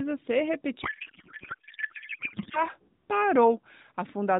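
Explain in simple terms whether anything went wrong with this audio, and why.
Something did go wrong, from 0.82 to 2.64 seconds. The speech turns into garbled noise and warble that barely follows it. This is a codec payload misread. The speech travels as packed bits from a phone-style codec, AMR narrowband. Here the receiver unpacked the bits in the wrong layout. The sound points to octet-aligned packets being read as bandwidth-efficient ones. Each frame still looks valid, but every field lands in the wrong place. The speech comes back after 2.64 seconds, and it has the slightly thin, phone-like sound of that codec.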